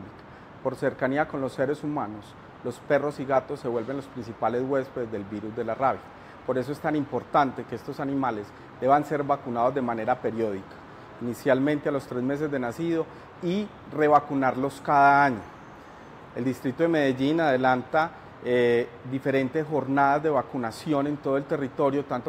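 Nothing in the audio stands out as a technical fault, so there's nothing to walk through here.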